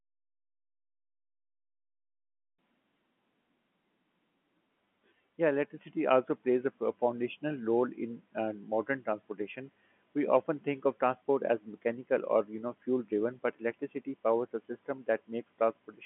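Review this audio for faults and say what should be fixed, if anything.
No faults found; nothing here needs fixing.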